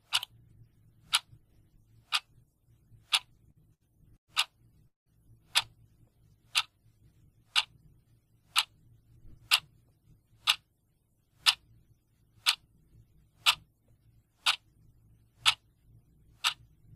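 The audio shows three timing faults from a packet receiver. Between 3.37 and 4.31 s there are repeated stalls (stutter): five short gaps, the longest 110 ms, bridged by stretching the last sound, about 241 ms in all and roughly a quarter of that span. Packets were arriving late, so the jitter buffer kept running dry. Nothing is lost, but the passage drags and stutters. From 4.88 to 5.09 s a call audio freeze inserts a 184 ms hold: the last sound is continued briefly and then drops to silence for about 140 ms before the audio resumes where it stopped, with nothing missing. This is likely an empty jitter buffer after delayed packets. Between 8.83 and 10.02 s a jitter buffer speed-up plays the audio at about 107% speed with unchanged pitch, trimming roughly a tenth of a second to shed the buffered delay, so that stretch sounds hurried.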